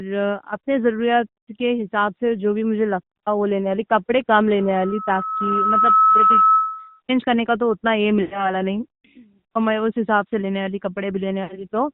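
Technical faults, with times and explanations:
Throughout: AMR narrowband mobile codec. The speech is confined below 4 kHz and has the buzzy, synthetic edge of a vocal-tract model driven by sparse pulses, which fits a mid-range AMR-NB mode around 10 kbps. The damage is plainly audible. On a spectrogram, energy stops abruptly at a flat ceiling near 4 kHz, consistent with 8 kHz sampling, and harmonics look smeared and grainy between frame boundaries rather than cleanly striated.
8.22–8.58 s and 11.44–11.65 s: lost AMR speech frames. Each gap sounds drawn out, then fades away, and the speech resumes weak and rough for a moment. The gaps fit runs of about 100 ms and 60 ms of missing data, roughly five and three 20 ms frames. The decoder repeated the last good pitch and vocal-tract settings at falling gain. On a spectrogram, frozen, repeated harmonic bands dim over the span. On the waveform, the envelope decays toward silence before recovering.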